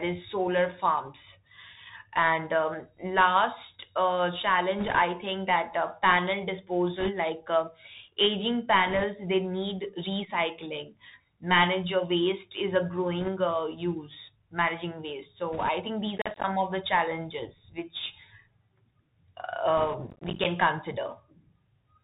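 Speech that sounds muffled and boxy throughout, with nothing above 4 kHz, scratchy s sounds and a granular hiss underneath, all marks of the Bluetooth CVSD headset codec, whose one-bit adaptive-step coding fits a 64 kbps link. Brief rushing, crackly noise at 4.79–4.99, 7.00–7.10, 8.87–9.05, 13.20–13.29, 15.53–15.69 and 19.77–19.95 s comes from bit errors on a Bluetooth voice link, with a few percent of bits flipped and no loud clicks. At 16.17–16.44 and 20.10–20.45 s a gritty tearing crackle is processor overload crackle, where a run of roughly 10 ms buffers missed their deadlines and left hard-edged silent gaps.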